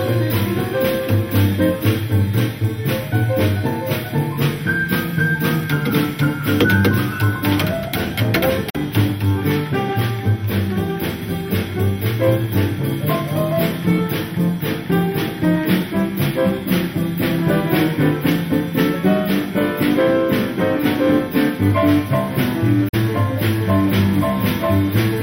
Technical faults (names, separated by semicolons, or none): Bluetooth dropout